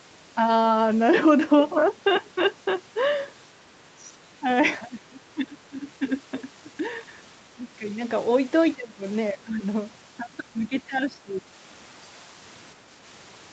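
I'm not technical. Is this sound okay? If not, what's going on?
No. The speech briefly dips in volume or partly drops out at 4.40–4.46, 4.79–6.12, 6.77–6.83, 7.35–7.99, 8.75–9.05, 9.33–9.63 and 10.53–11.46 seconds. This is likely speech suppressed in double talk: when both sides spoke together, the call's echo canceller turned this talker down.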